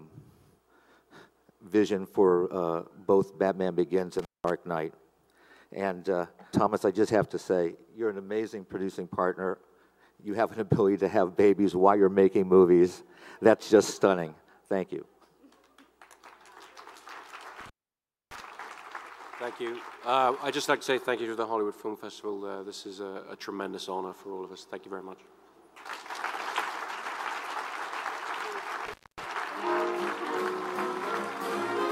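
A loose cable or plug is briefly losing contact, an intermittent contact fault that opens the signal path three times. Each break cuts the sound out, with crackle at the edges and faint hiss during the gap: at 4.19 to 4.50 s, with the line open for about 190 ms; at 17.60 to 18.40 s, the longest, open for about 620 ms; and at 28.86 to 29.25 s, open for about 240 ms.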